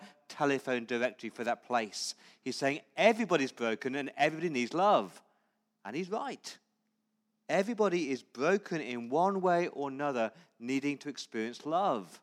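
Nothing stood out on listening to this speech recording.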